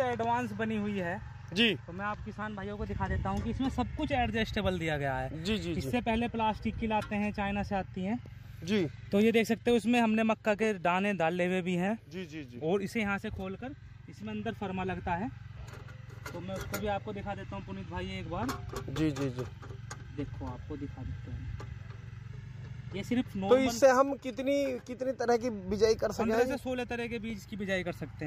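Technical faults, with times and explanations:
2.42–4.10 s, 11.87–12.90 s and 22.30–23.14 s, drift correction steps: the whole sound jumps about 6% faster and a semitone sharp in the first and last spans, and in the middle one drops 6% slower and a semitone flat, then snaps straight back. Likely a clock-matching stage nudging its playback rate in one hit to top up or drain its buffer. Tempo and pitch move together, so anything sustained suddenly sounds detuned.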